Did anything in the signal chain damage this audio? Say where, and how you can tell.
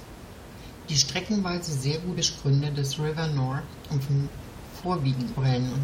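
Yes. At 2.16, 4.08 and 5.36 s the speech jumps ahead, losing roughly a fifth of a second each time. This is compressed frames skipped at the codec stage. About ten whole frames, consistent with 21.3 ms frames, were never played.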